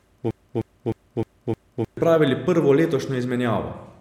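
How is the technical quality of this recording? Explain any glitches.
The recording has a clear glitch right at the top: a broken-record loop. From 0.0 to 1.97 s, a roughly 0.31 s chunk of speech repeats exactly, five times back to back. It's already going when the clip starts. The likely cause is a stalled player or stream resending its last buffered fragment, so whatever was said during those two seconds is lost.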